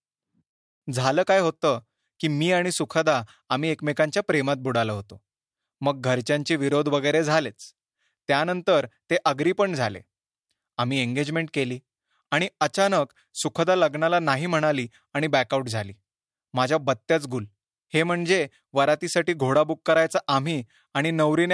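No technical faults occur at any point in the speech, so there is nothing to describe in time order.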